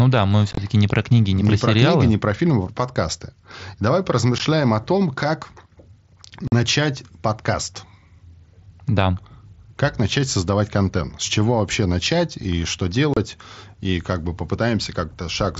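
Unconcealed Bluetooth headset packet loss occurs at 0.51 to 0.58 s, between "да мы" and "не про книги не", then at 4.38 s before "о том как", at 6.48 to 6.52 s, and at 13.14 to 13.17 s after "вообще начать и что". Short voice packets between headset and phone never arrived, and nothing was filled in, so the speech drops out with abrupt edges. The first event is a chopped cluster over about 60 ms. The wideband mSBC link can be heard otherwise.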